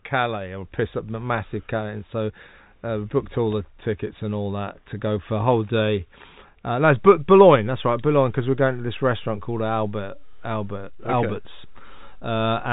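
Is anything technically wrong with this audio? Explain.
Yes. At 6.84 s a single low thump is heard, and the speech carries on unchanged through to the end. This is a DC step: the waveform's zero line jumps to a new offset at that instant and holds there for the remaining six seconds. The sudden shift is a very low-frequency transient, so it comes through as a dull knock. Once the offset settles, it is inaudible as a constant, but it eats into headroom. The telephone-band G.711 coding, with nothing above about 3.8 kHz, sounds as expected for that format.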